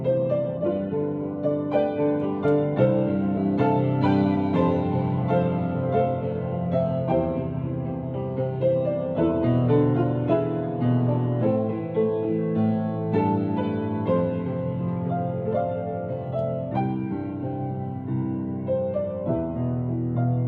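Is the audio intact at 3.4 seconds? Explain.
No. At 3.37 to 3.39 s there is a skip ahead. Playback lurches forward with no silence, so the sound on either side of the join runs together almost directly and about a second of material simply never plays. The stretch was discarded, either in transit or by a jitter buffer that overflowed while later audio was already queued, so the stream resumed from the newer data and the timeline jumped roughly a second ahead.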